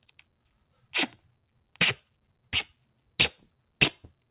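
From 0.03 to 0.93 s and again from 1.15 to 1.77 s, brief stretches sink by up to about 17 dB and 16 dB: sound cut by the noise suppressor, which mistook it for noise.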